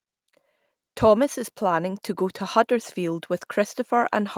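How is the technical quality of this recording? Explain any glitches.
No technical faults are audible.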